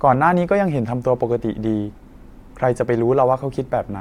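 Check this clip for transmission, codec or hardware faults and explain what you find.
No transmission, codec or hardware faults are audible here.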